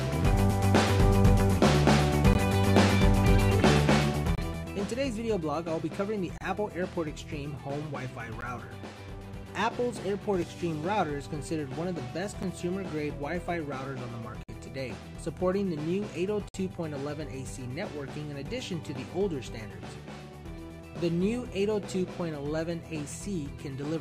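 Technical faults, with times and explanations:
2.33, 4.35–4.38, 6.38–6.41, 8.41, 10.42, 12.43, 14.43–14.49 and 16.49–16.54 s, gap between stream segments: misaligned segment timestamps leave holes the player fills with silence, giving hard-edged dropouts of 3 to 56 ms, roughly every 2 s, which fits 2-second segments.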